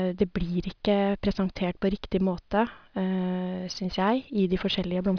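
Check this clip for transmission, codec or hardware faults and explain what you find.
No transmission, codec or hardware fault can be heard anywhere in this speech recording. There is nothing to report at any point in the audio.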